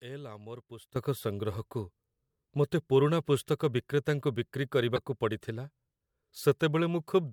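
A sudden gain jump hits at 0.96 s. From that point to the end of the clip, the speech and its background noise both step up by about 14 dB at once, with no fade between the two levels. Because the noise floor rises together with the speech, this is a change in digital gain, not a louder talker. The likely cause is a gain setting or bit shift applied from one sample to the next without a ramp.

A corrupt frame decoded follows at 4.95 to 4.98 s, lasting about 30 ms. Damaged bits in the compressed stream were decoded as if valid, so misread gains and codes put energy at frequencies that don't belong to the speech. The error spans a few consecutive frames and peaks around -20 dBFS. It is heard as a brief artificial blip or chirp laid over the speech.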